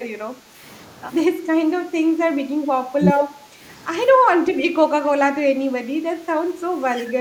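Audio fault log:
0.35–0.58 s, background gated by the echo canceller: the room tone thins for a moment, about 8 dB down, then comes back as the canceller pulls the microphone gain down while the loudspeaker plays.
2.62–3.10 s, speech suppressed in double talk: the speech dips twice, at 2.62–2.73 s and 2.97–3.10 s, each time by around 15 dB. The likely cause is both sides talking together, so the canceller could not tell the near talker from the echo and turned everything down.
3.39–3.60 s, background gated by the echo canceller: a brief gap in the ambience of about 7 dB as the canceller clamps down again during loudspeaker playback.
6.50–6.62 s, background gated by the echo canceller: a shorter, shallower dip of about 6 dB in the background before the gain recovers.
6.93–7.18 s, speech suppressed in double talk: the speech drops by around 15 dB for about a fifth of a second, likely from overlapping talk that the canceller treated as echo.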